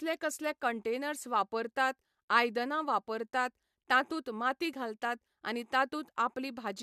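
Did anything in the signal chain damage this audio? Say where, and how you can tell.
No, no stage in the chain shows audible damage.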